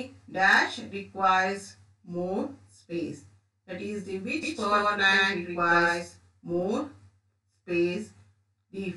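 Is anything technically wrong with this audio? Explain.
Yes. From 4.43 to 6.63 s there is a doubled audio track. A second copy runs about 150 ms behind at roughly equal level, likely from a second capture path. It starts and stops abruptly, with no decay.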